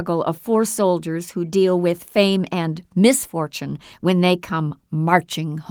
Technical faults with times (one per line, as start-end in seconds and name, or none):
none